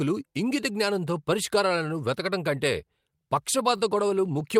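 Speech, with a brief held sound at 3.77 to 3.82 s that lingers with a faint buzzy dip before continuing. This is a short stall from a late packet: the jitter buffer ran dry, about 20 ms was stretched while waiting, and nothing was lost.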